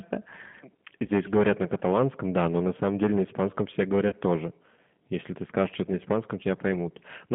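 Throughout the speech, a stage was overdriven by about 10 dB, so a few percent of samples hit the ceiling and were cut flat. That hard clipping puts a harsh crackle and fuzz on the louder syllables. The line also runs through a G.729 codec at 8 kbit/s, passing only about 150 Hz to 3.5 kHz, and the low-rate rebuild makes the voice muffled, rough and plainly synthetic. At 1.06 to 1.09 s, packets dropped and the decoder extrapolated its last pitch and filter, which fits two lost 10 ms frames. This VoIP packet loss concealed by the speech codec turns the sound into a brief buzzy smear that fades. At 4.09 to 4.15 s a longer gap, consistent with three lost frames, is concealed the same way. The resulting buzz lasts longer, and the voice stays weakened briefly after packets return.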